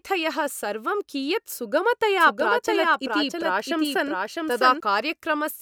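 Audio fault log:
2.20–4.80 s, doubled audio track: a second full-band copy of the speech runs around 0.7 s behind, roughly 5 dB quieter, likely from a slower capture path mixed back in. Unlike an echo, it has no decay or room colour and starts and stops abruptly.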